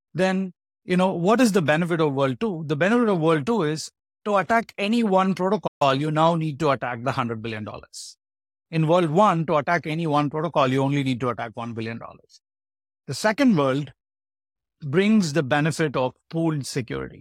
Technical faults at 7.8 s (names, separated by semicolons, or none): none